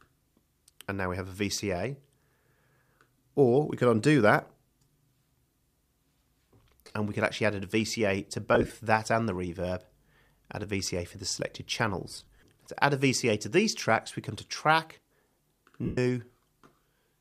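Lost LE Audio frames break up the sound at 6.85–6.94 s, 8.55–8.70 s, 12.11–12.46 s and 15.85–15.98 s. The losses total 67.5, 75, 150 and 120 ms, the first three scattered in short runs of a few tens of milliseconds. The LC3 decoder repeats the last spectrum with scrambled phase, so tones smear into a hiss. On a spectrogram, harmonic lines give way to flat, blurred noise bands, and the waveform loses its periodic shape.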